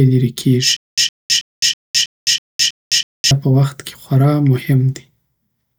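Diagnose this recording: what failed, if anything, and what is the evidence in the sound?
A stutter with silent gaps runs from 0.77 to 3.31 s, between "لېرې کېږي" and "په وخت کی خوار": a 112 ms fragment repeats eight times, each followed by 211 ms of digital silence, every 323 ms. A likely playback stall kept replaying its last buffer, so this span is lost. The dead silence between repeats rules out a codec's smoothed concealment.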